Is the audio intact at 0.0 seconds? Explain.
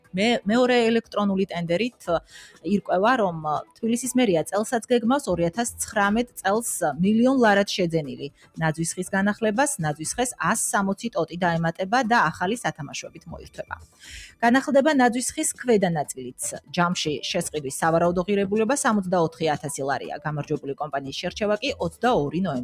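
No. The sound is cut by the noise suppressor from 0.0 to 0.15 s. The suppressor treats the opening as noise and pulls it down by about 20 dB at its deepest, so the first 150 ms come through sunken before the level recovers.

This happens because a noise suppressor built for speech is applied to non-speech sound throughout the clip. It judges steady and fading material as noise, so its gain swings by roughly 15 dB, making the sound pump and thin out as sustained parts sink.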